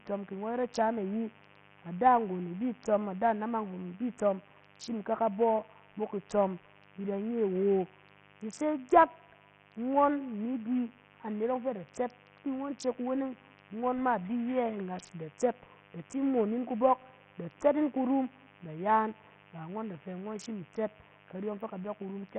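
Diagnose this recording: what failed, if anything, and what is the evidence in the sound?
In the analogue wiring, switching spikes from a dimmer, rectifier or unshielded run have got into the signal path, producing mains buzz at 50 Hz. The spikes land twice per mains cycle, so the interference carries a dense ladder of 50 Hz harmonics reaching into the kilohertz range. The result is a steady, raspy buzz under the speech for the whole clip, sitting about 30 dB below the speech level.

At the codec stage the speech has likely passed through Bluetooth SBC compression at a very starved setting, consistent with a bitrate around 48 kbps. SBC splits the audio into a few wide sub-bands and shares out bits with no real hearing model. At this setting the top bands get nothing, so the audio stops dead above 9 kHz throughout. The bands that remain are coarsely quantised, leaving heavy gritty noise and aliasing on the speech.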